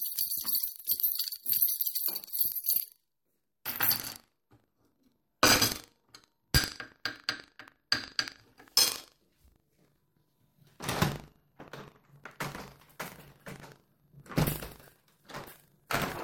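Buffer tearing runs throughout the clip, heard as a steady robotic rattle at 25 Hz that sits on the sounds and drops away when they fall silent. The writing side and the playback hardware have drifted so that they cross inside every 40 ms period, leaving a small slice, around a twentieth of each buffer, filled with audio from roughly 70 ms earlier. The hard joins on either side of that stale slice produce the rattle.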